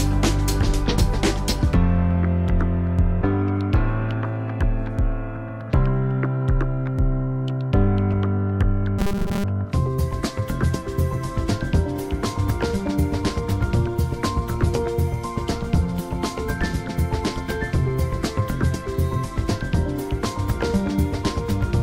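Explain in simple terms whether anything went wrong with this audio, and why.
Something did go wrong, for a brief moment. From 8.99 to 9.45 seconds the sound turns into a flat, metallic buzz. This is robotic sound from repeated short buffers. The likely cause is new audio arriving too slowly, so the player keeps replaying a tiny slice instead of waiting. Most of that stretch is repeats. Each slice lasts about 5 ms, so the repeats force a steady 200 Hz buzz onto the sound.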